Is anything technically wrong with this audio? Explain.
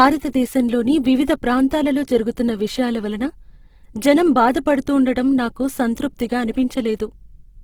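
Yes. Throughout the speech the tone is grainy and rough, with a noisy fizz, while the top end still reaches about 20.2 kHz. This is likely Opus compression in its music (CELT) mode, filling starved bands with noise at a rate that fits roughly 16 kbps.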